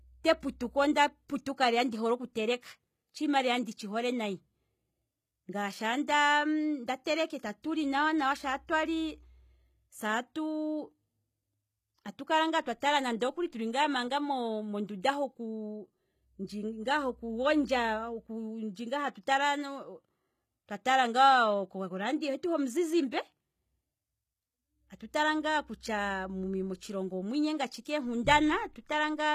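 All the way through, the treble sounds rebuilt rather than real: s sounds come out gritty and lispy, likely HE-AAC compression at around a 20 kbps rate.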